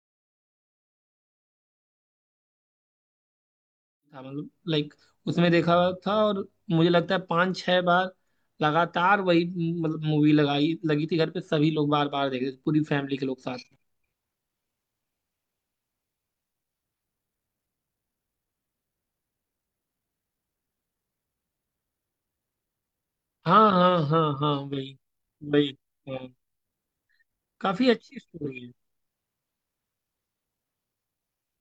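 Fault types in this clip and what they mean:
No fault types occur in this clip, so there are none whose meaning needs explaining.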